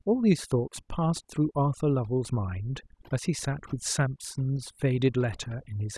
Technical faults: overdone noise removal

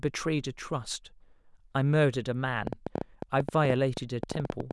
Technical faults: train of clicks

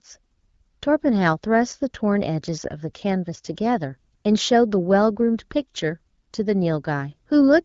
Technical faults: none

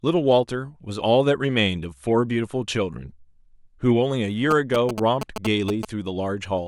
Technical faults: GSM signalling bursts

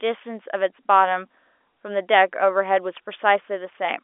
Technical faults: none

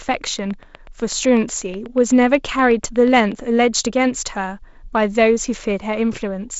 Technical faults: train of clicks

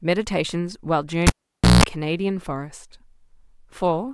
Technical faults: cable pulled and plugged in

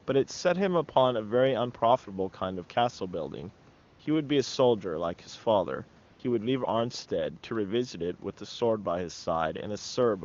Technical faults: AMR comfort noise

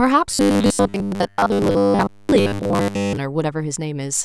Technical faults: robotic sound from repeated short buffers

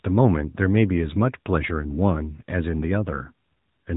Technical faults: AMR narrowband mobile codec

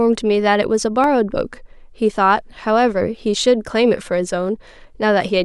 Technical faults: dropped samples

